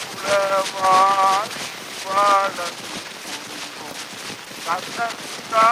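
From start to finish the clip carries USB whine, a fixed-pitch tone built on 1 kHz and its harmonics, with the strongest component up at 12 kHz. The 1 kHz spacing matches the 1 ms frame rate of USB traffic, whose current pulses have leaked into the audio path through shared power or ground. It sits roughly 35 dB below the wanted sound, heard as a thin, steady high-pitched whistle that does not change pitch.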